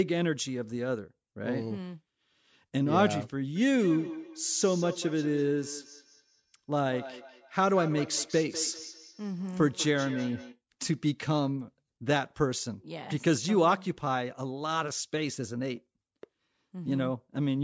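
From 3.56 to 10.6 s, a feedback echo between two devices sets in: one device replays another's microphone, which picks it up again, beyond either echo canceller's reach. The speech returns about every fifth of a second, thinner and ringing, peaking about 14 dB below it.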